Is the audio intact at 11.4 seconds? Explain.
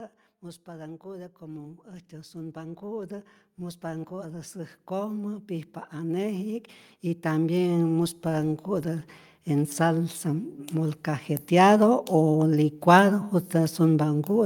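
No. At 11.4 seconds you're still inside a stretch of automatic gain rising that runs from about 0.64 to 12.09 seconds. The gain control decided the input was too quiet and kept nudging its gain upward, about 23 dB in all by the end. Because it's turning up the whole signal, the voice and the background noise swell together, so at 11.4 s you're hearing both lifted well above where they started.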